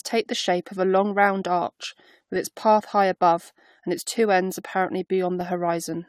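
Throughout the speech there is generation loss: a swirly, hollow, smeared texture with blurred attacks and nothing above 19.2 kHz, likely from around four successive AAC-LC passes at 96 kbit/s. From 0.84 s, just after "the shape of a", to 5.41 s, clock drift buffer slips produce four regular clicks spaced 1.52 s apart. A clock mismatch of roughly 200 ppm is the likely cause, dropping or repeating about 15 samples at each slip.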